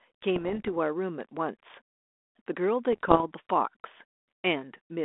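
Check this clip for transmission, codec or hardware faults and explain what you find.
The clip has one kind of fault, occurring twice in speech carried over a telephone-band ADPCM link.

Bit errors on an ADPCM link occur from 0.36 to 0.71 s and from 2.92 to 3.21 s, at error rates of roughly 0.5 and 0.4 percent respectively. Flipped bits corrupt the coded sample differences, and each corrupted code also throws off the decoder's adaptive step size and predictor. The damage therefore persists for several milliseconds after each error. The result is clicks and gritty, crackling bursts with brief jumps in level. The speech band, about 250 Hz to 3.6 kHz with mild coding grain, fits G.726 ADPCM at 32 kbit/s.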